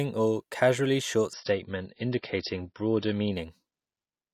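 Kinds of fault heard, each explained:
Adaptive stream at a lower bitrate: just after "or casually short" at 1.33 s, the speech abruptly turns dull and watery, with nothing above about 5.8 kHz, then snaps back to full clarity at 3.33 s, with no gap at either edge. The stream briefly switched to a much cheaper encoding when throughput dipped. The lost treble and the added smearing fit a drop from MP3 at 128 kbit/s to around 24 kbit/s for those two seconds.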